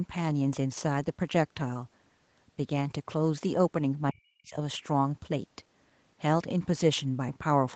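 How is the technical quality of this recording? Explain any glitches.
The recording has one clear glitch: a brief gap in the speech. The speech is band-limited with nothing above about 8 kHz, which fits a wideband Opus call at around 20 kbps.

From 4.11 to 4.57 s the speech drops sharply, by roughly 40 dB at its deepest, for about half a second. The likely cause is speech suppressed in double talk: while the far end was talking, the echo canceller could not tell the near talker apart from loudspeaker echo and attenuated everything, so this stretch of speech nearly disappears before recovering.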